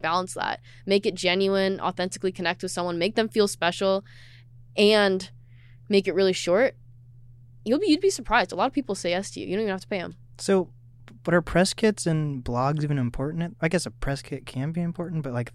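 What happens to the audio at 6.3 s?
Nothing goes wrong at 6.3 s; the speech carries on intact through that moment with no dropout, click or other fault.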